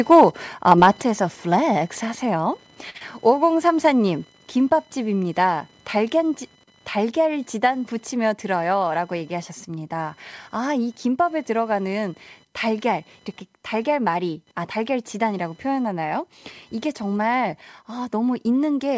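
Throughout the clip runs computer activity noise: a faint buzzing pulse near 1 kHz, roughly 35 dB below the speech, riding on the shared ground of the audio circuit. It rises and falls with the machine's load, not with the speech, which separates it from codec noise that tracks the signal.

At 1.02 s the level drops by about 5 dB in one step, speech and background together, and stays down. That fits a microphone volume stepped down, likely by the call software reacting to a loud input. A fade or compressor would move gradually and recover; this does neither.

From 2.90 to 2.97 s comes a short stall from a late packet. The last sound is held for about 46 ms with a slight buzz or dip, and the speech then resumes exactly where it stopped, so nothing is lost. The delay simply grows by 46 ms.

Right after, from 2.97 to 3.03 s, there is a short concealed packet loss. About 30 ms of speech never arrived and was replaced by roughly 27 ms of extrapolated sound, heard as a brief smear. 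Unlike the stall just before it, real content is missing here.

Between 8.62 and 8.92 s a jitter buffer speed-up plays the speech at about 110% speed. Around 40 ms of pitch periods are cut out to reduce the delay. The pace sounds hurried while the pitch stays put, which is what separates it from a resampling error, where pitch would rise too.

Across the whole clip nothing is heard above 8 kHz, which fits a G.722 call path at 64 kbps.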